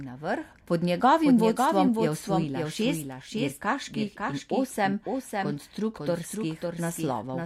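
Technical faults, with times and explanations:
Throughout, doubled audio track: the speech repeats about half a second later, a bit quieter and dry, likely a second copy caught through a slower path.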